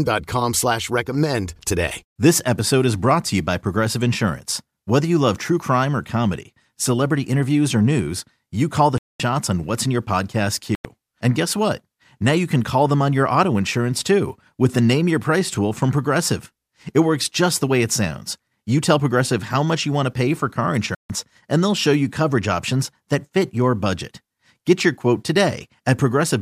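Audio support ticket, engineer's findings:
Speech playback drops to dead silence three times, 8.98 to 9.20 s (about 217 ms), 10.75 to 10.85 s (98 ms) and 20.95 to 21.10 s (149 ms), resuming each time with no fade. Pattern fits a Bluetooth stall, likely radio interference delaying packets until the headphone buffer empties. Playback halts until retransmitted audio arrives, then continues. Component: wireless link between phone and headphones.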